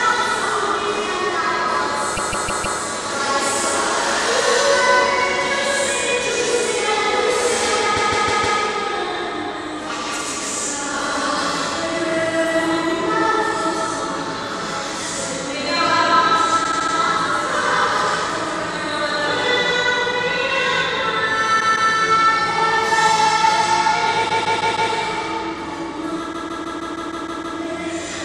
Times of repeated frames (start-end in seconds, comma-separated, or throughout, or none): 2.16-2.78, 7.96-8.58, 16.63-16.94, 21.59-21.91, 24.28-24.91, 26.32-27.57